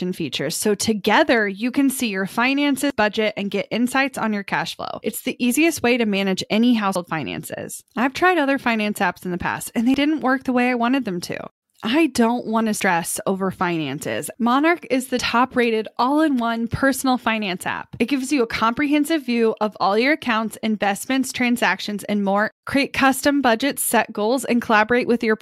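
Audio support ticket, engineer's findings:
Dropped buffer (overrun), speech: skip-ahead at 2.90, 6.96, 9.94, 12.80, 15.19 s, losing roughly 40 to 150 ms each. Likely capture-side overrun, samples overwritten before read. Unlike a dropout, there is no silent gap; the audio splices straight across.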